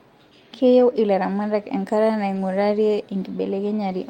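At 0.79–0.81 s and again at 2.35–2.37 s there's a lost packet rebuilt from error correction: about 20 ms of rougher, noisier speech, which fits one lost packet each time.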